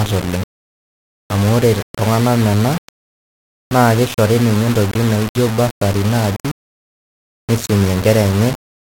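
From start to finish the speech carries a grainy, rasping distortion that moves with the voice, rising and changing character as the level shifts. Quiet passages turn gritty, and the softest tails and gaps sputter or drop to silence rather than fading. The likely cause is low bit depth without dither: the signal appears rounded to very few levels, consistent with roughly 4 bits, leaving error only about 15 dB below the speech.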